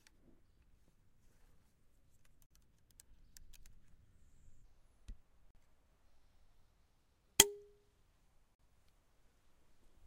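The audio was handled in 3-second chunks, and silence was inserted at each join. This is a gap between chunks. It cuts 44 ms holes into the sound at 2.46 to 2.51 s, 5.51 to 5.55 s, and 8.55 to 8.59 s.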